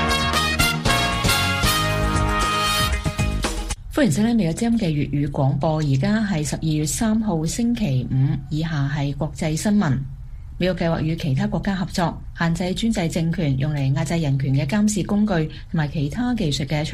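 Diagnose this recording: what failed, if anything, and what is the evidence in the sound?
Nothing in the signal chain shows a failure: the sound comes through with no audible interruption, distortion, level jump, timing slip or added noise at any stage.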